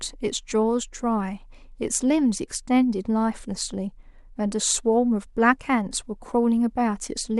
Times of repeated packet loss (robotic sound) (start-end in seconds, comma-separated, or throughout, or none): none